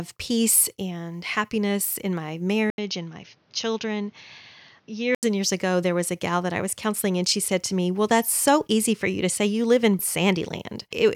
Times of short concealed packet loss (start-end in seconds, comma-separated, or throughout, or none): none